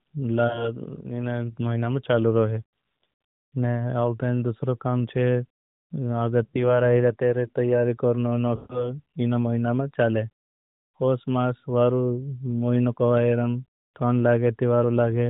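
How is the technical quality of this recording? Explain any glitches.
It's a narrowband AMR mobile call with lost AMR speech frames at 0.48–0.70 s, 6.44–6.81 s and 8.56–8.93 s. The decoder bridges each gap by stretching the last good sound with falling gain, so you hear a smear fading out, with roughly 40, 100 and 140 ms missing.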